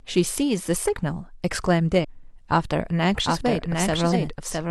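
Damaged data in a compressed stream hits this speech recording at 2.00 to 2.05 s and again at 4.09 to 4.14 s. Each time the decoder misreads corrupted frames, loses sync and hunts for the next frame header, producing a short chirp or blip. A doubled audio track enters abruptly at 3.09 s and runs to the end. A full-band copy of the speech trails roughly 0.7 s behind, about 5 dB quieter, with no decay or room colour, most likely from a second, slower capture path.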